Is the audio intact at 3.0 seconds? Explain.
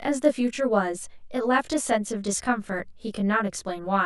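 No. Channel delay (comb filtering) runs throughout. One channel lags about 20 ms, so mono summing cancels evenly spaced frequencies from around 30 Hz, giving rough, slightly doubled speech and regular horizontal notch stripes on a spectrogram.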